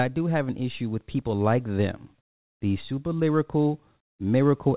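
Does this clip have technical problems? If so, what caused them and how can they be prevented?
No, there are no technical faults in this speech clip. It has passed through a normally working WebRTC call path, and nothing is heard above about 4 kHz, which fits narrowband G.711 mu-law coding.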